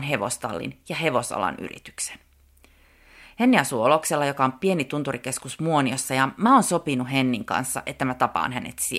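No technical faults can be heard anywhere in this speech recording. There is nothing in it that needs a timestamp or an account of what went wrong.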